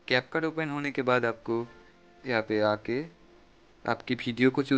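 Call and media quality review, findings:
No call or media quality faults found in this clip.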